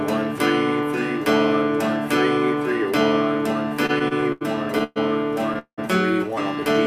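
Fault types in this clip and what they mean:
Repeated stalls (stutter): 3.69 to 4.43 s, seven short stalls up to 84 ms, each filled by stretching the last sound as late packets emptied the buffer, so the audio drags.
Call audio freeze: 4.84 s (121 ms) and 5.59 s (189 ms, fading to near silence for 80 ms), with the sound held then resuming where it stopped, likely from delayed packets draining the buffer.
Jitter buffer slow-down: 6.56 s to the end, repeated pitch periods add 41 ms to refill the buffer, so the audio runs at 90% speed with unchanged pitch.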